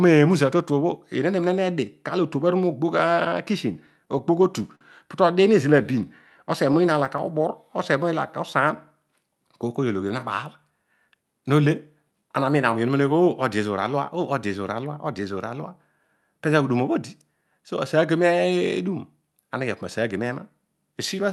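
From 3.73 to 4.84 s, packets arrived late and the jitter buffer ran dry seven times, causing repeated stalls (stutter). The receiver stretched the last sound across gaps of up to 55 ms, so the speech drags and catches. Between 5.54 and 6.38 s, and again from 6.81 to 8.77 s, a jitter buffer slow-down rebuilt its reserve by repeating pitch periods, adding 46 ms and then 113 ms. The speech plays at 95% speed without changing pitch, so sounds are drawn out. From 10.70 to 12.76 s, the opposite happens: a jitter buffer speed-up, after excess audio built up in the buffer, trimmed out roughly a fifth of a second. The speech runs at 109% speed, at the same pitch, and sounds hurried. Throughout the clip, the Opus call path at 64 kbps limits the top end to about 12 kHz.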